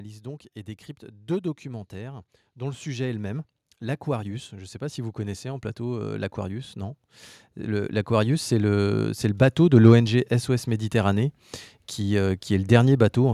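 A speech recording with automatic gain rising from 0.19 s to 9.9 s: the gain control, treating the input as too quiet, lifts its level by about 16 dB, so voice and background swell together. On a waveform the envelope widens steadily; a spectrogram brightens uniformly across all frequencies.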